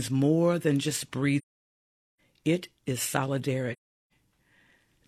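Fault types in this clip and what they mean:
AAC frame loss with muting: Blocks of coded audio never reached the decoder, so it replaced their spectrum with silence. The overlapping windows fade the sound down into each gap and back up after it, over roughly one frame. The speech drops out from 1.38 to 2.19 s, a hole of about 0.81 s. A shorter hole follows from 3.73 to 4.12 s, about 0.38 s. Both lengths fit runs of frames near 43 ms each.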